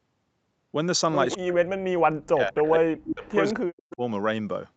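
Brief echo leak at 1.30–1.38, 2.66–2.70, 3.23–3.31 and 3.90–3.96 s: scraps of speech arriving 198 ms late, about 10 to 30 dB below the talker, likely residual loudspeaker pickup an echo canceller failed to remove. From 1.36 to 3.25 s and 3.51 to 4.02 s, speech suppressed in double talk makes the level dip by up to about 40 dB, likely because the canceller attenuated both overlapping talkers.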